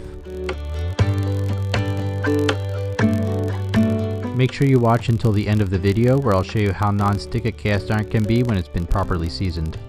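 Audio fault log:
Throughout, filter restarted on every block: a steady buzz at about 43.1 Hz runs under the sound, made of small regular ticks whose strength rises and falls with the signal's level. The filter is losing its stored state at each block boundary and beginning again from silence, so every block opens with a brief transient. The tick rate fits processing in 1024-sample blocks, and the repeated clicks fuse into a low buzz at that rate.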